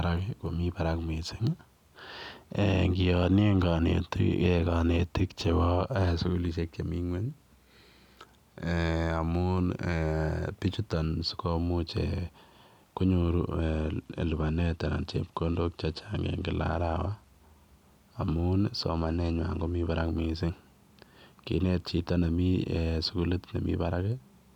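From 13.60 to 17.29 s and again from 18.92 to 20.03 s the speech goes dull and gritty: a Bluetooth SBC bit pool drop, consistent with the pool halving from 28 to 14 (about 108 kbps). The upper sub-bands starve and the remainder quantises coarsely until the rate recovers.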